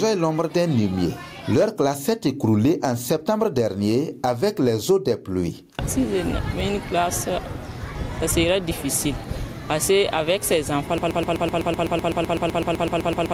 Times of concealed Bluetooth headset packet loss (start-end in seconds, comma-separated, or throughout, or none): none